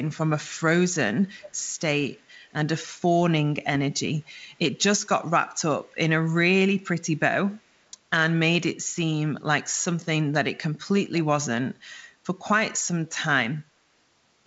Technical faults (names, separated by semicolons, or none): echo leak